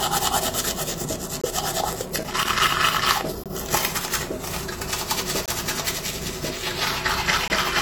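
Short hard-edged holes of silence break the sound at 1.41–1.44 s, and the same gap between chunks recurs at 3.44–3.46, 5.46–5.48 and 7.48–7.50 s. Each lasts about 21 ms and they arrive every 2.0 s, the signature of audio delivered in 2-second chunks with dead air inserted at every join. From 1.97 to 3.16 s an irregular burst of crackle and scratching intrudes. This is loose connector crackle: a worn or dirty contact rapidly making and breaking, chopping the signal.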